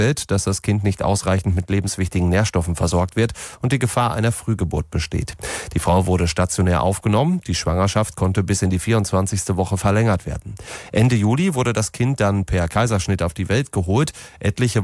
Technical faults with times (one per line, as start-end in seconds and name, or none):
none